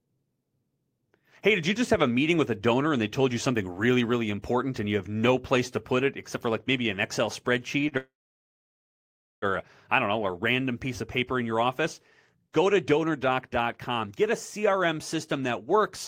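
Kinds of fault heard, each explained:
Short stall from a late packet: Around 7.89 s a packet came late, so the receiver stretched the last sound by 26 ms and then resumed where it left off, losing nothing. On a spectrogram the bands run flat briefly, and the waveform repeats a held cycle.
Call audio freeze: From 7.97 to 9.45 s the audio stops, most likely because packets were held up and the jitter buffer emptied. A fading buzz gives way to 1.32 s of silence, then it resumes intact. The waveform flattens and the spectrogram shows a blank band.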